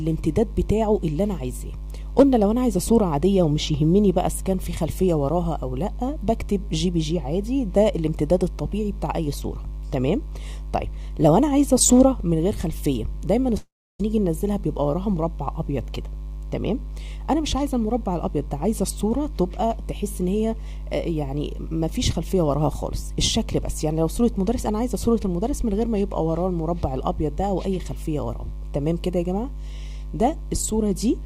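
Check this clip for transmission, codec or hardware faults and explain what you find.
There's one fault worth flagging. From 13.57 to 14.01 s the sound smears into a fading buzz, then goes silent for about 0.3 s before resuming with a chunk missing. That's likely a long network dropout, with the receiver stretching out the last sound until it had nothing left to fill with.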